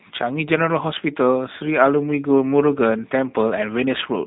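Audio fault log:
Throughout, G.729 codec: the speech sounds slightly rough and synthetic, with nothing above 4 kHz, which fits an 8 kbit/s G.729A stream rebuilding each frame from a filter and a few pulses.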